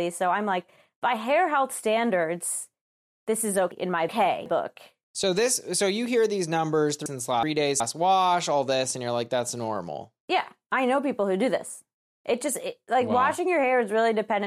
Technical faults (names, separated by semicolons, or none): chunks out of order